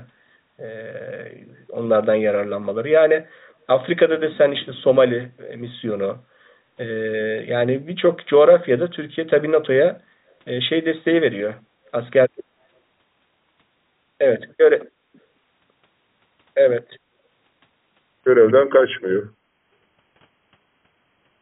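From 18.21 s to the end of the clip, a section at the wrong speed appears, most likely because playback was locked to a mismatched clock and the samples were read out at 0.878 times their recorded rate. Because speed and pitch are tied together, the speech suddenly slows and drops about two semitones, sounding heavier and dragged, all within the same narrow band that stops at 4 kHz, which fits a G.711-style call codec.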